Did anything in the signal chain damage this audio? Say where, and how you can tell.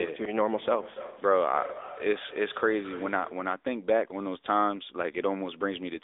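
Yes. The codec stage did: AMR narrowband mobile codec damage runs throughout, with nothing above 3.7 kHz and a buzzy, synthetic edge, which fits roughly a 10 kbps mode.

During call processing, feedback echo between two devices runs from 0.38 to 3.59 s. It repeats about every third of a second, peaking about 14 dB below the speech, because the other device's microphone recaptures the playback.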